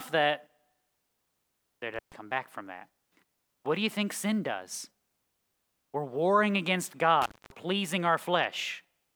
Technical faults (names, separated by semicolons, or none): intermittent contact